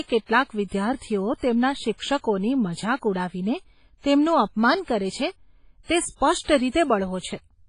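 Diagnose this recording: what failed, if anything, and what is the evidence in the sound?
Washy, ringing speech with a hiss that breathes with the signal, and nothing above 10.3 kHz throughout. This is a codec-stage fault, likely heavy WMA compression at a low bitrate, around 24 kbps.

A short hiss precedes a smeared attack from 4.85 to 4.88 s, between "મજાક ઉડાવીને તેમનું અપમાન" and "કરે છે તે". This is pre-echo: the block's quantisation noise spreads 27 ms ahead of the attack.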